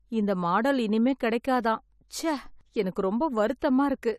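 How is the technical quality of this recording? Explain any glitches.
There are two short glitches, both pre-echo. The first runs from 2.08 to 2.10 s, just after "இந்த மாடல் இனிமேல் கிடைக்காதாம்", and the second from 3.59 to 3.62 s. The codec spreads block-wide quantisation noise ahead of a sharp attack, so you hear a short hiss creeping in about 20 to 26 ms early, and the onset itself comes across a bit soft and smeared.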